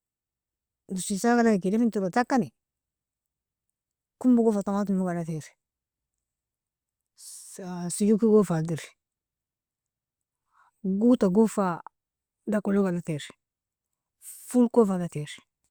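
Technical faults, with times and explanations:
No technical faults can be heard in this speech.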